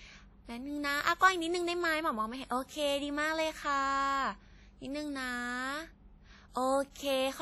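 Throughout the speech there is a ringing, washy texture with hiss that rises and falls with the signal, likely WMA compression at a low bitrate, around 32 kbps. From 6.91 to 6.96 s, pre-echo: the codec's block spreads quantisation noise about 48 ms ahead of an attack, leaving a brief hiss before a softened onset.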